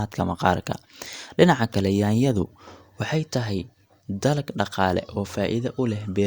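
Nothing in this speech recording stands out as a technical fault, so there's nothing to point to anywhere along the way.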